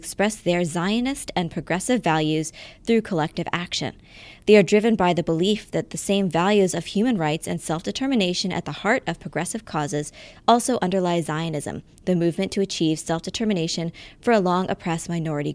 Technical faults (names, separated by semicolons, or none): none